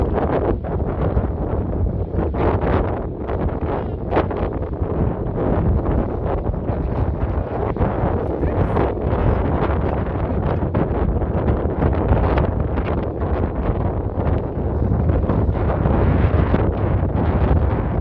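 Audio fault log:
Nothing stood out on listening.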